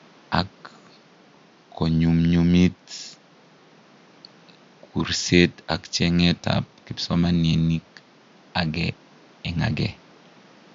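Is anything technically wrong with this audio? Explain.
No, there's nothing technically wrong with it.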